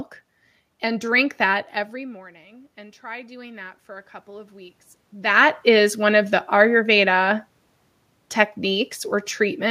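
Automatic gain rising, 1.92 to 6.31 s: the input dropped about 19 dB, so the gain control gradually added about 7 dB, swelling speech and room noise together.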